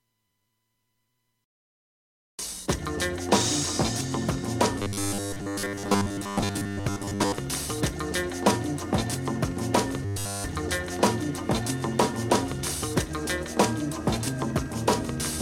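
From 4.78 to 7.38 s, and again from 10.05 to 10.44 s, the audio takes on robotic sound from repeated short buffers, a rigid metallic buzz fixed at 100 Hz. The likely cause is audio arriving too seldom, so playback keeps reusing its last 10 ms or so of audio. That repetition covers most of the first stretch and all of the second. Unlike a stutter, which loops longer audible chunks, this is too short to hear as repeats and fuses into a steady pitch.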